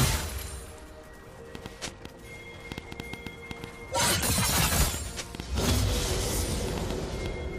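A train of clicks runs from 1.55 to 7.27 s: around thirty similar pulses at an irregular 4.7 per second, well above the audio level, likely from electrical interference or a faulty connection.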